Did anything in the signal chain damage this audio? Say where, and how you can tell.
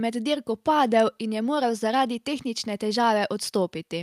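No, nothing along the chain seems to have touched this speech; I can't hear any sign of damage at any stage.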